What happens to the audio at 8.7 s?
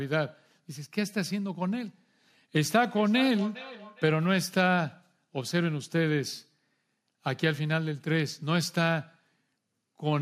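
At 8.7 s the speech carries on cleanly, with no dropout, click, distortion or other audible fault at that moment.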